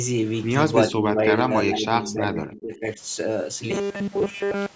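A short speech recording with two problems. From 0.91 to 2.99 s the voice keeps ducking, by about 20 dB at its lowest and for roughly a second and a half in total, which points to speech suppressed in double talk: an echo canceller likely couldn't separate this talker from the far end's echo and turned both down. Then from 3.71 s to the end, the voice turns into a rigid, metallic buzz at 200 Hz that still loosely tracks the speech. That's the robotic sound from repeated short buffers. Most of that stretch is a repeated 5 ms slice, likely from audio arriving too late, so the same buffer gets looped while real audio is skipped. The call's microphone processing, which cuts everything above 8 kHz, isn't a fault.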